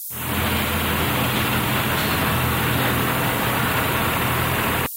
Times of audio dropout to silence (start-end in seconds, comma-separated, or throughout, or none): none